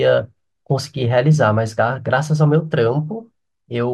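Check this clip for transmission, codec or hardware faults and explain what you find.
The speech signal is continuous and steady throughout, with nothing audible that points to a problem anywhere in the chain that carried or captured it.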